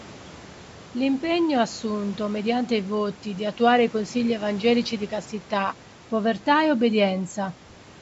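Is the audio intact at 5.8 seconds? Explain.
Yes, the speech at 5.8 seconds is intact, with only the usual call microphone processing and some faint room noise well beneath it.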